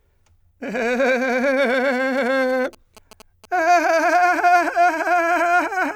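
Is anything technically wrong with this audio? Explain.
Yes. From 2.17 to 3.46 s, a galloping dit-dit-dit pattern of short buzzes sits well below the music, the buzzes pitched at about 217 Hz. These are GSM signalling bursts: a nearby 2G phone, exchanging brief control traffic with its network, radiates short clusters of radio pulses that the audio circuitry rectifies into sound. The 217 Hz repetition rate of those pulses sets the buzz pitch, and their grouping produces the irregular galloping rhythm.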